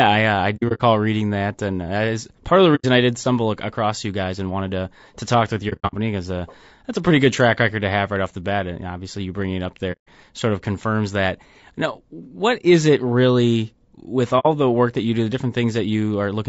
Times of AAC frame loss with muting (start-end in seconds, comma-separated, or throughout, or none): 0.56-0.81, 2.75-2.85, 5.69-5.95, 9.92-10.08, 14.39-14.46